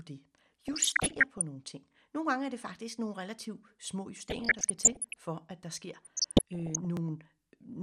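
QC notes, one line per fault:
Throughout: MP2 compression. The speech is dull, with a gurgling, granular edge, likely from MPEG Layer II coding at a low rate near 80 kbps that switches off upper sub-bands and coarsely quantises the rest.
0.68–1.42 s, 4.16–5.19 s, 6.03–6.85 s: DAB burbling. Burbling blips sit over the speech; the first ends just before "nogle ting". A bit error rate somewhat under one percent corrupts samples and scale factors, so single sub-bands get short noise blips and jump in level for up to a frame.
1.93–1.95 s, 4.45–4.47 s, 6.97–6.99 s: overlapping chunks. A 21.33 ms stutter-click follows "nogle ting" and "faktisk nogle relativt små". Each 2.5 s chunk starts before the previous ends, replaying that slice at every join.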